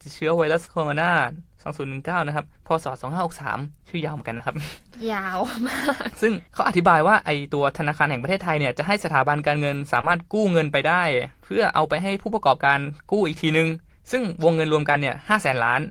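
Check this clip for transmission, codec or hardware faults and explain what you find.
Short concealed packet loss occurs four times in this speech, at 0.65, 4.37, 10.01 and 14.91 s. Each time about 20 ms went missing, which fits one lost packet. The receiver extended the preceding sound and blended back, giving a brief smear or wobble. A spectrogram shows frozen, smeared harmonics.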